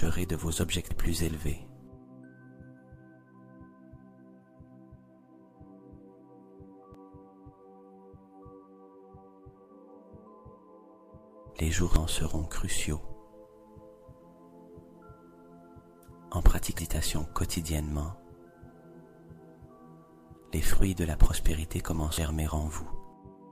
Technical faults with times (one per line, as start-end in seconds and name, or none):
0.91 damaged data in a compressed stream
6.94 damaged data in a compressed stream
11.96 damaged data in a compressed stream
16.79 damaged data in a compressed stream
22.18 damaged data in a compressed stream